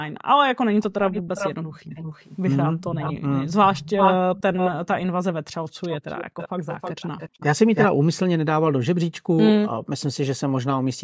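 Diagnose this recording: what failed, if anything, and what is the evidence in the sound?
Echo leak in the call processing: delayed repeats at 0.08, 0.81–4.71 and 5.82–7.87 s, lagging 236, 396 and 319 ms. This is likely an incomplete echo canceller. The spectrogram shows harmonic patterns duplicated later in time.

Background gated by the echo canceller: the room noise dips about 10 and 14 dB at 1.62 and 2.69 s, then almost vanishes at 5.64 and 9.7 s. These show as brief notches in the noise floor.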